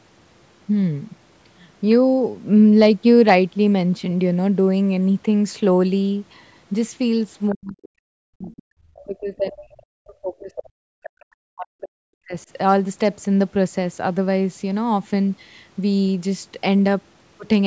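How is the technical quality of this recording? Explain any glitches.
The recording has echo-control faults in the middle of the speech. Nothing is heard above 8 kHz, which fits call microphone processing.

Other side's voice leaking through: brief scraps at 7.50–7.55 s and 11.03–11.09 s, about 20 to 25 dB below the speech. Likely residual loudspeaker echo the canceller missed.

Speech suppressed in double talk: the voice dips by up to about 40 dB at 7.52–7.88 s and 8.25–12.36 s. Likely the canceller ducked both talkers during overlap.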